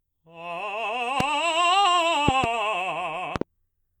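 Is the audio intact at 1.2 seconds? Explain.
No. A loud pop sits on the music from 1.20 to 1.23 s, a single sharp thump peaking roughly 20 dB above the surrounding level. It is likely a voltage pulse from a plug, switch, static discharge or driver glitch that entered the signal path and was shaped by the following circuitry. Unlike a dropout, the music carries on unbroken beneath the pop, so nothing is missing, only added.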